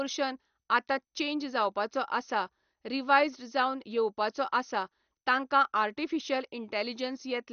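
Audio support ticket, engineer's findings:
MP2 compression artefacts, throughout the speech. Dull, band-limited, nothing above 6.5 kHz; gurgling, granular distortion plainly audible. Likely MPEG Layer II encoding starved of bits, consistent with around 48 kbps: upper sub-bands switched off, remaining bands coarsely quantised and flickering.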